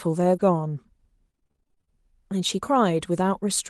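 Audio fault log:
0.35–0.41 s, lost packet rebuilt from error correction: about 40 ms, which fits two lost packets, plays as rougher, noisier sound with no break. The following packets carried low-bitrate Opus copies, so unlike plain concealment nothing is stretched, smeared or missing.
1.31–1.89 s, repeated packet loss (robotic sound): 15 separate dropouts, the longest 26 ms, leave nearly half of this stretch concealed by extending the previous sound. Holes arrive faster than the patches can settle, giving choppy sound with pieces missing, unlike one clean error-corrected repair.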